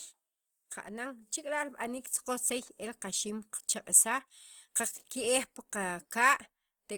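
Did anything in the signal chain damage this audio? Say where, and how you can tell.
Yes. Opus compression runs through the whole clip, likely at the codec stage. The top end still reaches about 20.1 kHz, so the encoder kept full bandwidth and stayed in its music (CELT) mode rather than falling back to a muffled speech mode. The damage is plainly audible in the speech: with too few bits, bands are filled by folding lower ones or with noise, leaving tones rough and grainy. That points to a low rate around 24 kbps.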